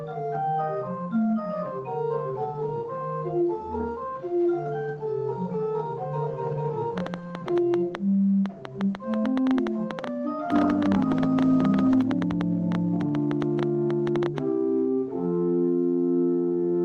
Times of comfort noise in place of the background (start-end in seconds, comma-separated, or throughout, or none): none